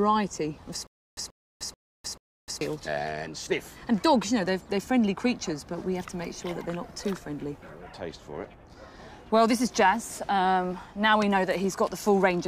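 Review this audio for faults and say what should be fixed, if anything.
From 0.87 to 2.61 s there's a stutter with silent gaps: a short burst of about 132 ms plays, then about 304 ms of dead digital silence, and that same burst comes back four times at a steady 436 ms rhythm. That's most likely the player or stream stalling, replaying its last fragment on each retry and then running dry, so whatever should have played in that stretch is just gone. To prevent it, give the stream more buffer headroom so a stall doesn't starve playback.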